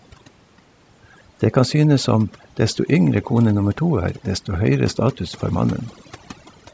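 Throughout, there's overdone noise removal: the reduction was pushed so hard it gutted quiet speech along with the background noise, leaving twinkly near-silence between phrases.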